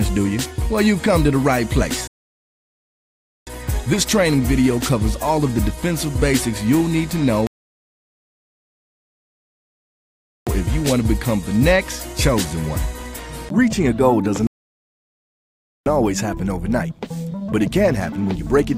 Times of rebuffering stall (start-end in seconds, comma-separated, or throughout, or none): 2.07-3.47, 7.47-10.47, 14.47-15.86